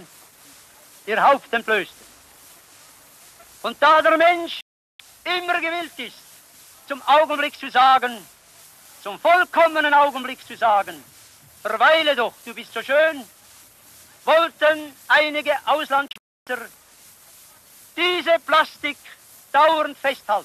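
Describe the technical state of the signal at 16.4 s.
At 16.4 s you're right inside a digital broadcast dropout that runs from about 16.08 to 16.47 s. The receiver stopped getting usable frames, either the signal dropped or they failed their checks, so it muted. The audio snaps off with a fast 3 ms fade, and the gap isn't one clean hole: about 336 ms of sound goes missing across roughly 384 ms, with the longest silent stretch lasting 288 ms. Whatever was sent in that window is simply gone.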